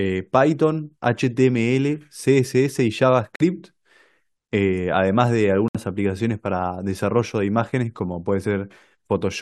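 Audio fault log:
3.36 s and 5.68 s, corrupt frame muted: speech drops to dead silence twice, for about 0.06 s starting at 3.36 s and about 0.08 s starting at 5.68 s, with abrupt edges and no slowing or smearing around them. That points to damaged compressed frames the decoder rejected, with the player filling each gap with silence; the lengths fit two and then three frames of about 28 ms each. The timing stays intact, so the speech resumes on schedule after each hole.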